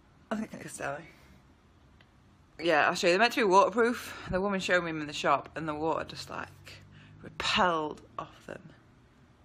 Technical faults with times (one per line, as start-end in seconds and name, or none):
0.44-0.64 frames out of order